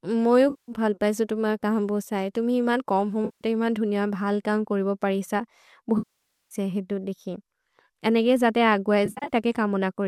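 AAC frame loss with concealment breaks the speech four times. The decoder rebuilds missing audio from the last good spectrum. At 0.50 to 0.72 s, after "मोउ यो" and before "भल् पैसे तुम्ह कम्", 180 ms becomes a smeared, noisy patch. At 3.25 to 3.44 s, after "बोसे तुम्हि इमन् कम्", 160 ms sounds phasey. At 5.98 to 6.55 s, 530 ms decays toward silence and fades back. At 9.06 to 9.33 s, after "अनेगे जते अग् बहि", short gaps of up to about 70 ms scatter across 240 ms. The stream is likely low-delay AAC.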